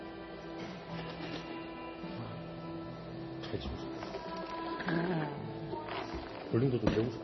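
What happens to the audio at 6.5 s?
At 6.5 s the audio carries the same damage present throughout the clip, most likely MP3 compression at heavy settings. Nothing is heard above 5.9 kHz, the fixed ceiling an encoder imposes when bits run short, and the upper content sounds watery and swirly as weak frequency lines drop in and out between frames. Transients are smeared rather than crisp. The degree of damage fits a low bitrate of about 24 kbps.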